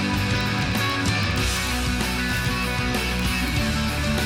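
From about 0.12 s right to the end there's a run of word clock ticks: sharp clicks of uneven strength roughly every 30 ms, around 150 in all. The receiver isn't locked to the sender's clock, with an offset of something like 700 ppm, so each slip drops or repeats a single sample.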